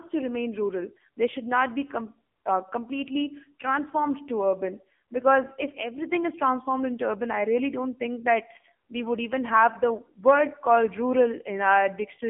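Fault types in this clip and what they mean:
AMR narrowband mobile codec: the speech has been squeezed through the old 2G/3G phone codec, so it lives in a 200 Hz to 3.4 kHz band with nothing above 3.5 kHz, and the heavy buzzy, synthetic edge points to a low mode around 6.7 kbps.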